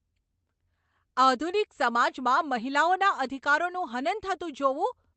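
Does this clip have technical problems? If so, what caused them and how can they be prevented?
No, there are no technical faults in this speech clip. It has passed through a WebRTC call path, and the way its high frequencies stop at 8 kHz fits an Opus call codec running in its wideband mode.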